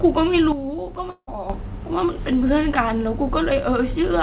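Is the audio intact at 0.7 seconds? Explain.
No. From 0.52 to 1.50 s, the speech and its background noise drop together by about 9 dB, switching abruptly rather than fading, so 0.7 s falls within the quieter stretch. This sudden gain jump likely comes from a digital gain change applied between adjacent samples without a ramp.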